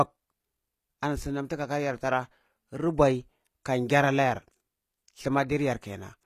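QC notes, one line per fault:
Throughout: HE-AAC compression, likely, with plainly audible damage consistent with about 24 kbps. Treble is synthesised from copied lower bands, so s sounds turn gritty and lispy. On a spectrogram, upper harmonics look repeated and misaligned, and everything stops abruptly at 14.9 kHz.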